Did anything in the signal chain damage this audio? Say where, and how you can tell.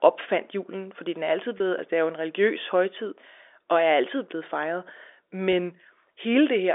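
Yes. There was packet loss with pitch repetition at the network stage, at 1.58 to 1.60 s, between "fordi den er altid" and "altså det er jo", and again at 5.52 s. Each gap is bridged by a brief held, slightly buzzy tone. The receiver looped the last pitch period of speech to cover roughly 20 ms and 10 ms of missing audio, which fits two packets and then one being dropped. The losses were too short to fade to silence. The narrowband G.711 telephone path is audible as well.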